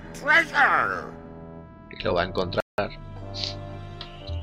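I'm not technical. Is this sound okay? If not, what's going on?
No. At 2.60 s the sound freezes into silence for about 0.18 s, then resumes at 2.78 s. This is a playback stall, likely the player briefly running out of data.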